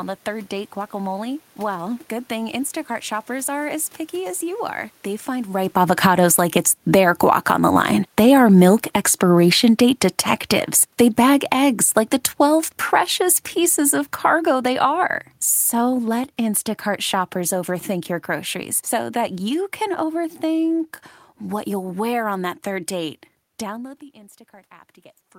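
At 5.49 s the automatic gain falling fault begins. The gain control judges the input too loud and pulls its gain down slowly, by about 17 dB in total, until 17.7 s. The speech and the room noise behind it sink together, so the drop cannot be a change at the source, even though it starts around the same time the talker shifts position near 5.5 s. The effect is a long, steady fade.

Inside that fade, from 6.28 s to 9.42 s, an automatic gain rising fault runs against it. The control briefly treats the input as too quiet and lifts the gain by about 3 dB over roughly three seconds. Voice and background swell together for that stretch, working against the downward slide.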